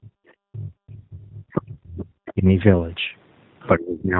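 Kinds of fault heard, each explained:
G.729 codec: Throughout, the speech sounds slightly rough and synthetic, with nothing above 4 kHz and plainly audible coding damage. The sound fits an 8 kbit/s codec that rebuilds the voice from a vocal tract filter, a pitch predictor and a few pulses per frame.
speech suppressed in double talk: The voice drops sharply or vanishes in three places: briefly at the very start, for most of 0.5 to 2.09 s by as much as about 40 dB, and again near the end by about 30 dB. The likely cause is an echo canceller muting its own talker while the far side spoke.
VoIP packet loss concealed by the speech codec: Around 1.74 to 1.77 s a short stretch is stretched into a buzzy tone or coloured noise that fades. A gap of about 20 ms points to one lost packet, which the decoder filled by extrapolating its last pitch and filter settings at falling gain.
other side's voice leaking through: Between 2.26 and 2.33 s a faint second voice appears, about 20 dB below the main speech. 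This is likely far-end audio from the talker's loudspeaker that the echo canceller failed to remove fully from the microphone signal.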